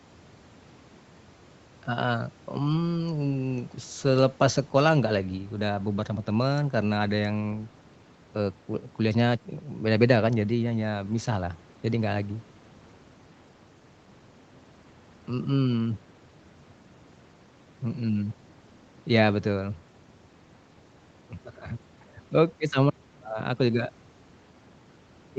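Nothing's technically wrong with this speech clip; it just has the usual call sound, with the highs stopping around 8 kHz, which fits audio that has gone through a call's microphone processing and codec.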